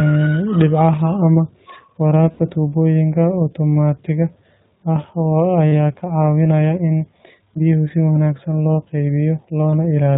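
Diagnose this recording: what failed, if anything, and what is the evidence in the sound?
The codec stage ran the speech through the iLBC codec, which cuts everything above 4 kHz. Throughout, the speech sounds plainly muffled, rough and synthetic, consistent with about 15 kbps.

On the network, packets went missing, causing lost iLBC frames. At 2.32–2.40 s, just before "tubooyinka otomaatiga", and again at 5.69–5.73 s and 7.54–7.58 s, the decoder holds a buzzy, breathy vowel, then recovers at once.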